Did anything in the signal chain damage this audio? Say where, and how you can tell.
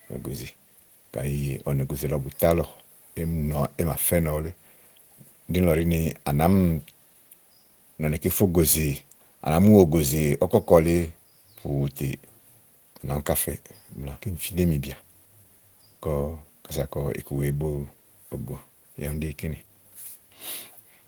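No, nothing in the chain harmed this speech; the Opus voice compression, running in hybrid mode at 20 kbps, keeps the full band up to 20.2 kHz and leaves only the light touch you'd expect from that codec.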